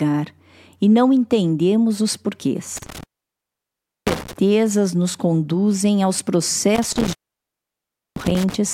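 Intermittent contact breaks the speech from 2.77 to 4.33 s and again from 6.75 to 8.55 s, just after "nos conduzem aos". Each time a loose connection opens for about 1.0 s, so the signal drops out to faint hiss, with crackle at the break and remake.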